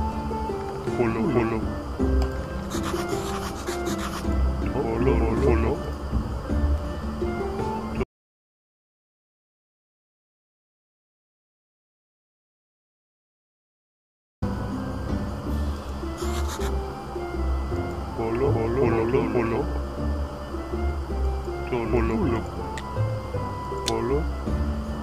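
At 8.04 s the sound cuts off abruptly into silence, with no room tone underneath, and returns mid-flow at 14.42 s. This audio dropout to silence loses about 6.4 s, likely because the input signal was interrupted while the recorder kept writing silence.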